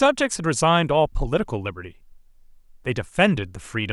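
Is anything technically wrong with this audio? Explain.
No, no technical faults heard.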